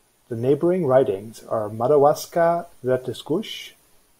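No technical faults are audible.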